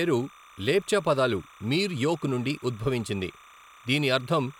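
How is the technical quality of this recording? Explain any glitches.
There's one real problem: timecode bleed running the whole way through, under the speech. Linear timecode from a nearby track or cable has leaked in, a square wave flipping between roughly 1 and 2 kHz at a 29.97 frames-per-second rate, heard as a faint, steady chirping warble sitting around 25 dB below the voice.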